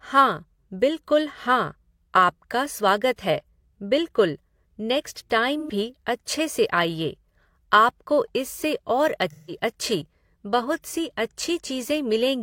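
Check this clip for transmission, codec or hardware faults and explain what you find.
AAC frame loss with concealment occurs at 5.60–5.70 s and 9.30–9.56 s. About 85 ms and 171 ms went missing, consistent with two and four lost frames. The decoder rebuilt each gap from the last good spectrum, leaving smeared, noisy patches in the speech.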